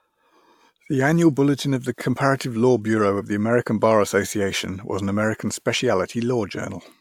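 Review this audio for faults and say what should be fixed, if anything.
Nothing in this audio needs to be fixed, as it has no faults.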